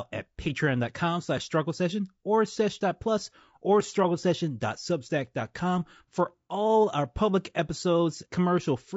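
Low-delay AAC compression runs throughout: the speech sounds rough and grainy, with noise between harmonics, likely from AAC-ELD's short frames at a bitrate around 32 kbps.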